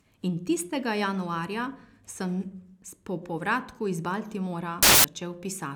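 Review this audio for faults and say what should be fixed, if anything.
From 4.83 to 5.04 s the speech gives way to a burst of loud, harsh broadband noise: samples built from the wrong bytes. The reader misassembles each sample's bytes, so fast-changing low bits dominate. Unlike clipping, this is harsh broadband noise rather than distorted speech. Fixing this means checking byte order, offset and alignment against the format header whenever samples are decoded.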